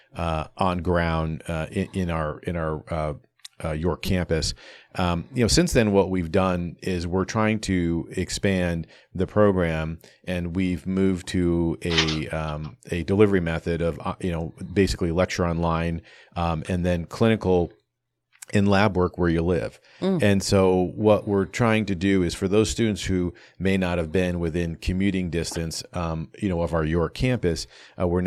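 At 4.05 to 4.08 s, a compressed frame arrived with some of its bits flipped, and the decoder played it rather than discarding or concealing it. This is a corrupt frame decoded. The damaged data misdirected gains and spectral codes, so for roughly one frame's length, about 34 ms, energy landed at frequencies where the speech had none. The result is a brief, fairly loud chirp or burst of noise, peaking at around -10 dBFS.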